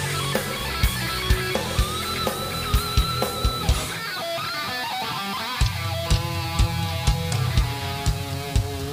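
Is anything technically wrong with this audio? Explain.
Yes. Throughout, the sound is coarse and grainy, likely from low bit depth without dither: rounding to about 5 bits leaves signal-following distortion roughly 15 dB down, a staircase waveform, and broadband spectrogram haze.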